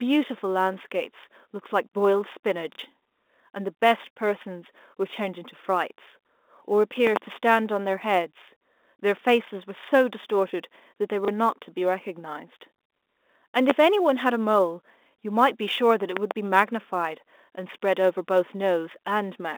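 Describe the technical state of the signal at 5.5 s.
At 5.5 s the speech carries a fine hiss and grainy roughness that swells on louder syllables and sharper high-frequency sounds and drops away in the pauses. This is sample clock jitter, present throughout the clip: an unsteady converter clock takes each sample a few microseconds early or late, so the error grows with how steeply the waveform is changing, landing roughly 35 dB below the signal within the narrow 250 Hz to 3.6 kHz telephone band.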